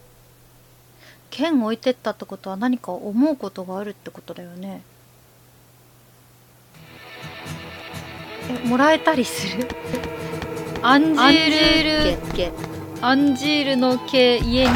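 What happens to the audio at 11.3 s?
A doubled audio track runs from 9.93 to 13.05 s: an equally loud copy trails about a third of a second behind, likely from a second capture path. Waveform and spectrogram show every event repeated, with abrupt start and stop.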